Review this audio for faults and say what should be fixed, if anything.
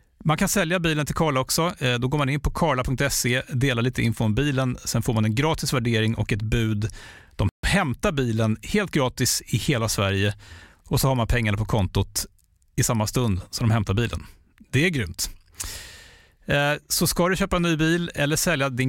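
At 7.49 s the speech drops abruptly into silence for about 145 ms and picks up again at 7.64 s, just before "hämtar bilen helt gratis". This is a playback stall, likely caused by the player running short of buffered data or its audio thread being blocked, so output halted until it caught up. A deeper playback buffer, with the audio thread kept at high priority and free of blocking work, would prevent it.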